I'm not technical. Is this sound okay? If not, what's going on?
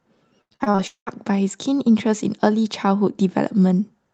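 No. From 0.41 to 1.08 s there's repeated packet loss (robotic sound): seven little dropouts, patched with stretched sound, so the speech turns choppy.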